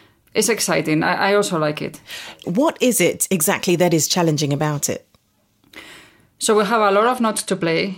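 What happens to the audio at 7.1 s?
At 7.1 s you're inside a Bluetooth SBC bit pool drop running from 7.02 s to the end, 7.98 s. The link starved the encoder of bits, so the top sub-bands thin out and the rest quantise coarsely: dull, gritty speech, which fits roughly 94 kbps.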